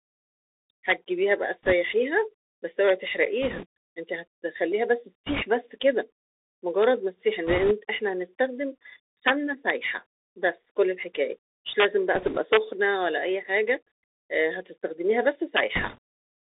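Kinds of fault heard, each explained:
Bluetooth CVSD headset codec: Throughout, the speech sounds boxed into a narrow telephone band of roughly 300 Hz to 3.6 kHz, with scratchy s sounds and a granular hiss underneath. The cause is the one-bit up-or-down delta coding at 64 kbps, whose adapting step can't keep pace with loud, fast high sounds.
Integer overflow: Violent cracks, far sharper than clipping, break out on loud peaks at 0.90, 6.83, 9.28, 11.8, 12.53 and 15.57 s. A sum or gain ran just past the integer limit, by about 0 to 3 dB, and wrapped to the opposite sign instead of being held at the ceiling.
Bit errors on a Bluetooth voice link: Short bursts of rushing, crackly noise spread over the speech, lasting about 0.1 to 0.26 s, at 1.63, 3.42, 5.26, 7.47, 12.15 and 15.75 s, with no loud clicks. Flipped bits on the headset link, a few percent of them, each nudge the delta-coded signal by an amount that grows with the speech level before the error fades away.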